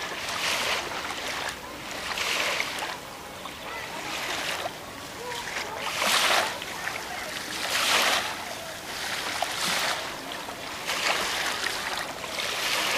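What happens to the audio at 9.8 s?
Nothing goes wrong at 9.8 s; the audio plays through that moment intact, with no dropout, click or other fault.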